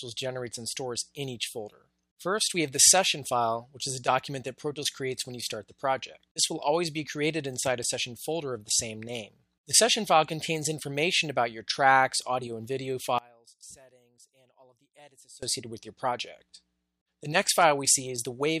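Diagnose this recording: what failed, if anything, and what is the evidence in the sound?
One channel inverted, from 13.19 to 15.43 s: the sound, background included, suddenly drops by about 27 dB and then returns at its normal level. The likely cause is a polarity reversal on one side of a stereo pair, in the analogue wiring or at the stage where the two channels are summed to mono. Whatever both channels share then cancels, leaving only the small difference between them audible for those two seconds.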